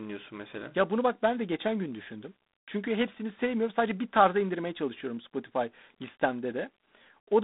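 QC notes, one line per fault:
throughout, G.726 ADPCM: speech is coded as coarse differences from an adaptive prediction, with few bits per sample, which fits 24 kbit/s. The quantising error sounds as a harsh, rasping hiss tracking speech level, over a 200 Hz to 3.7 kHz band, nothing above 3.8 kHz.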